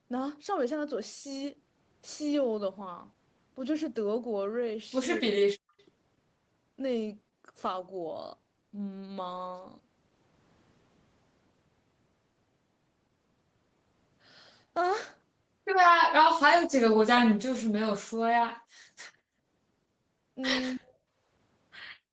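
At 5.79 to 5.83 s there is what is likely an echo leak. The far-end loudspeaker's output reached its microphone and slipped past the echo canceller, so a copy of the speech came back about 211 ms late. It lasts only some 40 ms and sits very low, roughly 40 dB under the speech, so it is a faint ghost of earlier sound rather than a clear repeat.

From 16.02 to 18.22 s the speech is suppressed in double talk, most likely because both sides spoke at once and the echo canceller could not tell the near talker from the loudspeaker echo, so it turned everything down. For about two seconds the speech sinks by as much as roughly 40 dB. It then rises back once the overlap ends.

Shortly after, at 18.75 to 18.87 s, the background is gated by the echo canceller. While the loudspeaker played, the canceller clamped the microphone hard, cutting the room sound by about 35 dB for around a tenth of a second. 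The result is a brief deep dip in the ambience before it returns.

A second spell of speech suppressed in double talk follows at 20.71 to 20.98 s, again likely from overlapping talk that the canceller muted. This one is shorter, about 0.3 s, and shallower, a drop of around 30 dB that clips the speech briefly. All of this sits within a call path whose Opus coding caps the audio at 8 kHz, which is expected.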